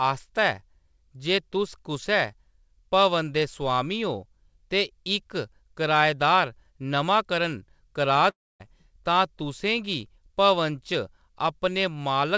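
A long network dropout runs from 8.30 to 8.62 s. The speech breaks off and is replaced by a buzzy continuation of the last sound that fades away, leaving near silence for about a quarter of a second before the voice returns with roughly 0.3 s of material gone. This is likely packets failing to arrive, with the receiver concealing the gap and then resuming past the lost stretch. Throughout, the audio carries nothing above 8 kHz, which fits a wideband call codec such as G.722.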